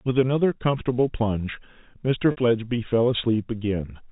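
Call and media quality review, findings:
Packet loss with pitch repetition, 2.31–2.37 s: a 60 ms gap is concealed by repeating the last pitch period, so the sound briefly holds a slightly buzzy, sustained tone. The gap fits two lost packets. The G.711 telephone-band sound is heard around it.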